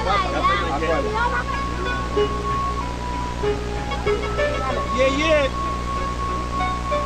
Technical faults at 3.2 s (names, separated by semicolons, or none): none